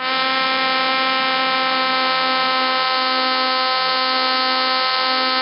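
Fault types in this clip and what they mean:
Nellymoser compression: the music was likely squeezed through Flash's old Nellymoser Asao codec, whose heavy low-bitrate coding (fitting about 22 kbps) starves weak bands of bits and fills them with noise, leaving a rough, hissy, smeared sound with nothing above 5.3 kHz.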